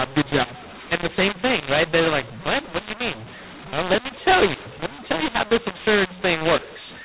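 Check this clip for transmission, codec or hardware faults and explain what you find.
There's one fault, and it runs through the whole clip: a mu-law and A-law mix-up. The speech was encoded as G.711 mu-law but decoded as A-law, so every 8-bit code lands on the wrong step of the logarithmic scale. Some levels come out too loud and others too soft, which makes the speech harsh and gritty. The quietest samples get pushed well above zero, so the pauses fill with hiss instead of going silent. The telephone band itself is intact, cutting off at 4 kHz, which fits 8 kHz sampling.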